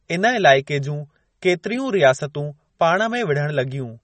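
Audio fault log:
Throughout, MP3 compression: a likely low-bitrate encode, fitting about 32 kbps, cuts everything above 8.4 kHz and leaves the speech plainly watery and dull.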